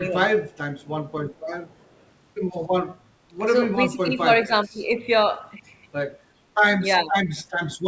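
From 0.0 to 0.19 s and 0.58 to 0.81 s the speech sinks by about 10 and 20 dB, likely speech suppressed in double talk: the waveform envelope pinches and the spectrogram fades briefly.

From 1.35 to 1.4 s and 1.67 to 2.06 s a faint copy trails 376 ms behind at about 40 dB down, likely an echo leak, showing as a weak, offset ghost of the harmonics.

Speech suppressed in double talk recurs at 3.89–4.27 s, 4.45–4.82 s and 7.04–7.17 s, with dips of about 10, 20 and 15 dB, heard as the voice dipping.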